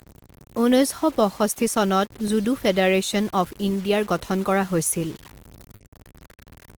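Low bit depth without dither affects this whole speech recording: a grainy, signal-following distortion sits roughly 25 dB below the voice, turning quiet passages gritty and making decaying tails sputter. The likely cause is truncation to very few bits, which fits about 6-bit audio. Clock drift between sender and receiver also runs throughout, with the sending end's clock slow by around 3 percent. The receiver's jitter buffer keeps draining, so playback has to be patched continually to stay in step. Those repeated timing corrections run from 0.74 s to 6.78 s. Each one repeats a short piece, slowing playback to about 98 percent speed and adding roughly 150 ms overall. They are heard as faint hiccups and a slightly unsteady tempo. A dropped buffer (overrun) at 2.28 s produces a small forward jump in the sound. The likely cause is the program missing its samples before the hardware overwrote them, losing around 15 ms with the two sides butted together. 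A short stall from a late packet occurs between 5.76 s and 5.82 s. The buffer ran empty, so the last sound was held for 40 ms until the packet arrived. Nothing is missing, but that moment is briefly stretched.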